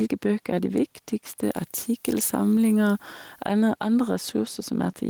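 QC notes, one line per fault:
Throughout, gain pumping: the input gain is likely set too high, so a fast compressor or limiter clamps down on every loud syllable. The gain swings by around 5 dB, leaving the level squashed and breathing.
1.43 to 3.46 s, pre-emphasis left on: a treble boost matching a 50 µs FM curve was applied with no matching cut afterwards. Highs sit about 10 dB above 1 kHz at 10 kHz, so the speech turns thin, bright and hissy on sibilants.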